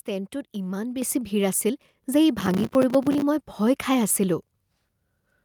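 A speech recording with two faults. At 1.02 s the microphone volume steps up by about 6 dB in one jump, lifting voice and background together as the call software raises input gain. From 2.40 s to 3.22 s a processor overload crackle tears through the speech: dozens of missed buffer deadlines each leave a short hard-edged silent gap, a pattern that fits buffers of around 5 ms.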